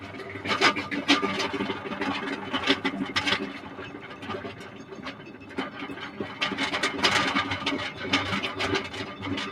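Across the whole clip the level pumps and thins, with swings of roughly 10 dB, because a noise suppressor meant for speech was applied to these sounds.

Sound cut by the noise suppressor appears from 0.00 to 0.16 s, 3.56 to 4.23 s and 4.59 to 5.53 s. Each sinks by about 5 dB, because the suppressor took those stretches for noise.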